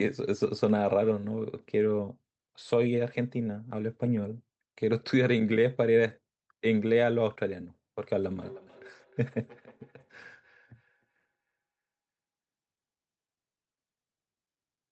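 Speech clip with feedback echo between two devices from 8.35 to 11.56 s: repeats about every third of a second, peaking near -29 dB, as a second device replays the audio into the microphone.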